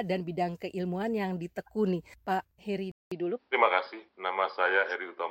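At 2.92 s the recording likely switched its input to a poorer device, leaving a 200 ms silence. Afterwards nothing passes above 5.7 kHz, so the sound turns dull and boxy, shifts in level and gains a faint new noise floor.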